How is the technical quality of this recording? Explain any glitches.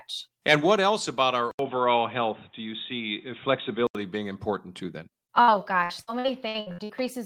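The recording has two distinct faults, both in the speech path.

From 1.51 to 3.95 s the sound turns dull and boxy, with nothing above 3.8 kHz, an 80 ms silence at the change, and a faint new noise floor around 40 dB down at unchanged level. That points to an input switched to a poorer device, likely a narrowband headset or microphone.

From 5.41 to 6.92 s there is repeated packet loss, giving robotic sound. Frequent short holes, the longest 62 ms, are filled by extending the preceding audio, so about 30% of the stretch is synthetic, making it choppy.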